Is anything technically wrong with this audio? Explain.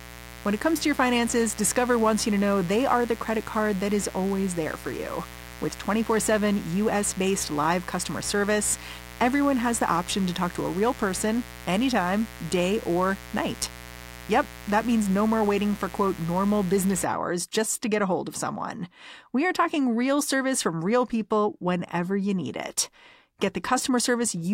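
Yes, mains buzz runs from the start to 17.05 s. Switching spikes from a dimmer, rectifier or poor shielding leak into the signal twice per 60 Hz cycle, spreading harmonics into the kilohertz range. The result is a steady, raspy buzz sitting only around 15 dB below the speech.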